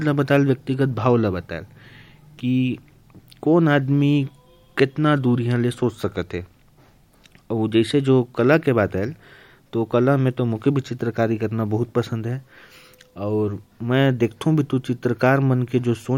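Nothing goes wrong anywhere in this bit of speech, so there's no fault to point to at any moment in it.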